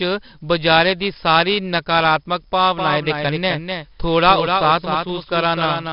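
From the first moment to the end, the speech carries 4-bit ADPCM compression. Each sample is coded as a small step from a predicted value, so the coding error rises and falls with the level. Every loud syllable brings a gritty hiss. Sharp attacks distort because the step size cannot keep up. The damage is heavy, which fits a rate around 44 kbps. Nothing is heard above 5.3 kHz, so the sound is also dull.

At 2.76 s a doubled audio track begins and lasts to the end. A second full-band copy of the speech trails the first by roughly 300 ms, about 5 dB quieter. It has no decay and no room colour, so it is not an echo. It starts abruptly. The likely cause is the same audio being captured again through a slower path and mixed in.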